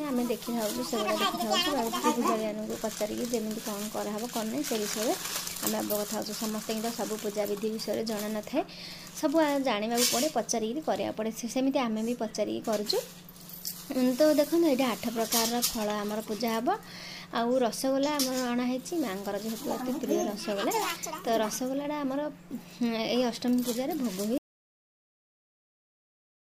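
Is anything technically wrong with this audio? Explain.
Yes. At 24.38 s the audio drops out to silence and stays that way to the end. The input was likely lost, and the recorder kept writing silence. The cut is abrupt, mid-flow. No room tone remains. Whatever followed is gone.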